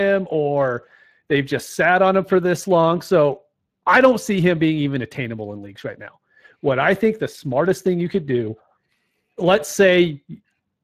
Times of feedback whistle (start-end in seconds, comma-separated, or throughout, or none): none